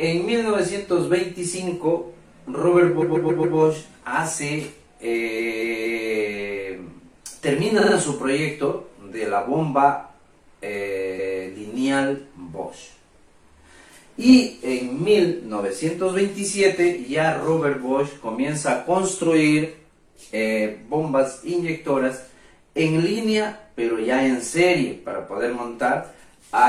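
Repeated frames make the audio stutter at 2.98–3.53 s, 5.34–6.04 s, 7.76–7.91 s and 11.15–11.43 s. In each, a block of 139, 232, 46 and 279 ms respectively was decoded again. Unlike a dropout, nothing is lost; each repeat makes the audio longer.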